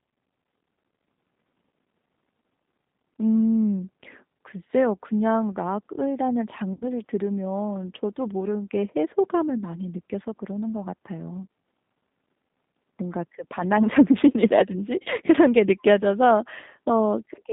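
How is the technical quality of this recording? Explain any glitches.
The recording has audible technical damage: a low-bitrate telephone codec colours all of it, and two short dropouts were patched over by the decoder.

G.729 codec, throughout the 17 s of speech: the band runs only from about 150 Hz to 3.7 kHz, which fits an 8 kbit/s G.729A stream. The codec rebuilds each 10 ms frame from a vocal-tract filter, a pitch predictor and a few pulses, so the voice sounds thin, slightly rough and synthetic, with plainly audible coding damage.

VoIP packet loss concealed by the speech codec, at 6.73 to 6.84 s and 15.03 to 15.10 s: the first gap covers about 90 ms, which fits three lost packets, and the second about 30 ms, which fits one. The decoder filled each hole by repeating its last pitch and filter settings at falling gain. The voice briefly smears into a buzzy tone or coloured noise that fades, and because each frame builds on the previous one, it stays weak or distorted for a moment after the real audio resumes.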